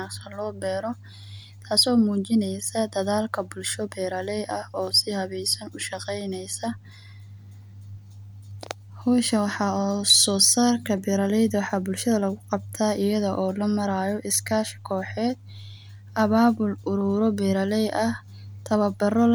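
Speech recording with no audible technical faults.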